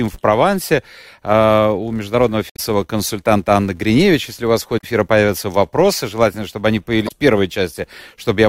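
Throughout the speech, a filter is restarted on every block: it discards its internal state at each block boundary and begins again from silence, so every block opens with a small transient. Those transients recur at about 188 Hz, which fits a 256-sample block, and are heard as a steady buzz under the voice that grows and fades with its loudness, dropping away in the pauses.

Three short events come from damaged data in a compressed stream. Corrupted frames are misread by the decoder, which loses sync and hunts for the next valid frame header. The first, from 2.50 to 2.59 s, follows "а у международного". The second, from 4.77 to 4.84 s, falls between "у вас в" and "эфира появятся вопросы желательно". The third, from 7.05 to 7.12 s, comes after "вопросы желательно чтобы они". Each is brief.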